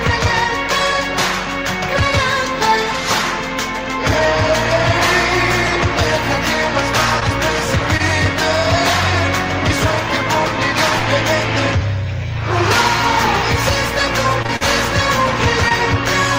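Short concealed packet loss occurs at 7.20, 7.97, 14.42, 14.46, 14.56 and 15.69 s. Each hole of about 20 ms, 40 ms at 14.56 s, was patched by extending the preceding sound. This gives a brief smear or wobble rather than the clean silence of a plain dropout.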